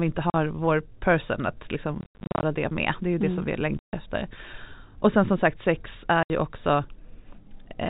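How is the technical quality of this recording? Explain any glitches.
The speech is interrupted by dropouts from packet loss filled with silence. It plays through the G.711 telephone path, so nothing above 4 kHz is present.

The gaps fall at 0.30 to 0.34 s, 2.01 to 2.43 s, 3.79 to 3.93 s, and 6.23 to 6.30 s. The longest stretch is scattered. It loses 300 ms within 420 ms, and its longest single hole is 90 ms. Packets never arrived, so the receiver played silence instead. Each hole starts and stops abruptly. The lengths step in 10 ms units, which fits 10 ms packets.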